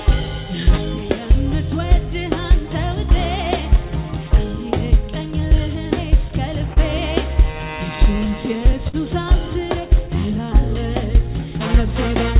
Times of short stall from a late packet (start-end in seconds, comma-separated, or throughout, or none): 6.73-6.78, 8.88-8.95